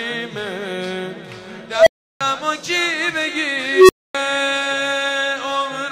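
At 1.73 s and again at 3.72 s there's an unstable filter: bad coefficients let a recursive filter run away. A tone around 700 Hz, then around 400 Hz, swells over 133 and 175 ms, clips, overflows, and drops to silence for 341 and 256 ms before resetting.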